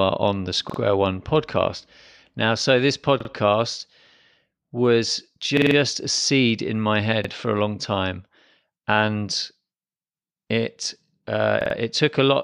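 Repeated buffer stutters occur at 0.70, 3.20, 5.57, 7.25 and 11.61 s in this speech, each a 46 ms block replayed with a hard join. That block length fits a 2048-sample buffer the device reused when new audio arrived late. The block sounds three times after "on the", three times at 3.20 s, five times at 5.57 s, twice between "seed in my head" and "for a long time", and four times after "it uh". No audio is skipped.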